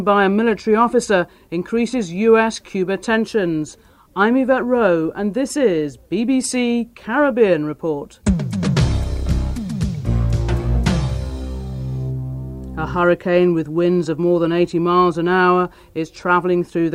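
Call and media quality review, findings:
No faults found in the reviewed audio. Nothing audible calls for follow-up on the call or media path.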